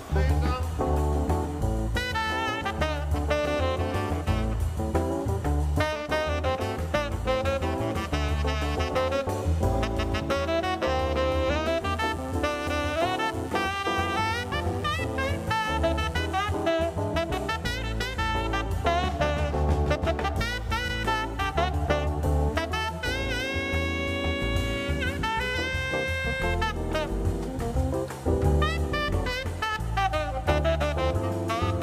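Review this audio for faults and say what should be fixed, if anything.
From 11.84 to 16.64 s there is mains buzz: spiky 60 Hz interference, around 25 dB below the audio. Its raspy upper harmonics set it apart from a smooth, low hum. Shielded cables, proper grounding and keeping dimmers and rectifiers away from the signal path would prevent it.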